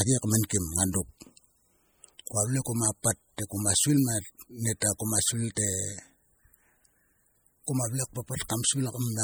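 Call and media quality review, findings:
MP3 compression throughout the speech: watery, swirly texture on s sounds. Likely a low-bitrate MP3 encode, fitting roughly 48 kbps, where weak frequency lines drop in and out between frames.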